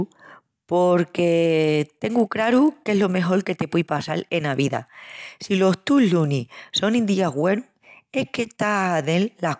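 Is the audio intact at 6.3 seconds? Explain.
No, 6.3 s sits inside a stretch from 1.14 to 6.76 s where the resampler restarted on every block. Each 20 ms block was converted without its neighbours, leaving a small error at every edge, so you get a 50 Hz buzz riding under the speech.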